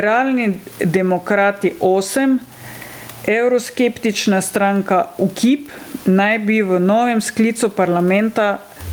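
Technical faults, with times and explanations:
Throughout, gain pumping: room noise swells in pauses and ducks around 20 dB under speech, likely from excessive gain feeding a fast limiter.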